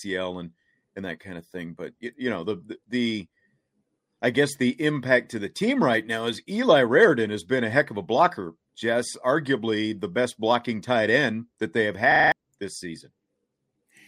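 At 12.12 s, right after "end that they have", the speech gives way to a system hang loop lasting until 12.32 s. The machine stalled while the audio hardware kept replaying its ring buffer, so one 40 ms slice of sound repeats exactly five times, a harsh 25 Hz rattle replacing about a fifth of a second of speech. Packet-loss concealment would fade or vary its stand-in, but here every copy is identical.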